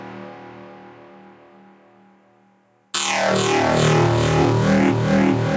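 Gain pumping runs throughout: the gain swings by around 10 dB, likely from excessive gain driving a fast limiter. The waveform envelope looks flattened. The spectrogram shows nothing above 8 kHz, as expected from call microphone processing.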